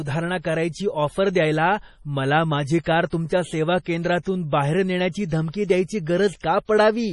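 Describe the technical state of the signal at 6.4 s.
At 6.4 s the speech sounds watery and swirly, with nothing above 11.4 kHz, as throughout the clip. The likely cause is heavy MP3 compression, which fits a 32 kbps bitrate starving and dropping weak frequency lines.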